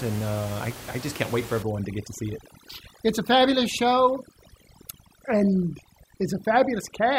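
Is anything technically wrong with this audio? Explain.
Yes. From 1.62 s, right after "just can't wait for", to the end, there is overdone noise removal. A noise reducer set far too strong cuts whole frequency bands near its noise estimate. The room noise, about 17 dB below the speech, drops and breaks up into twinkling specks. Quiet parts of the voice vanish too.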